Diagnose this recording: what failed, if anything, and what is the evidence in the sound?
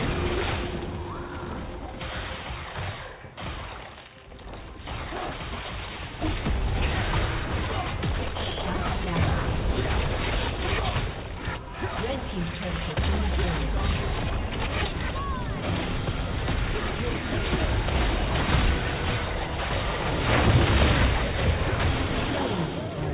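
Nothing stood out on listening; the sound carries the narrowband character of a phone-call path, with nothing above 4 kHz, which fits a G.711 mu-law codec at 64 kbps, and no failure was audible at any stage.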